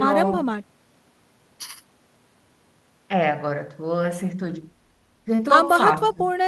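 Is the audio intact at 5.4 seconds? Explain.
No. From 5.35 to 5.41 s there's a short concealed packet loss: about 40 ms never arrived, and the receiver extended the last speech sound to cover it, giving a brief smear or wobble. Overlapping it, from 5.39 to 5.45 s, is a lost packet rebuilt from error correction, with about 40 ms played from low-bitrate backup copies, which fits two lost packets. That stretch sounds rougher and noisier.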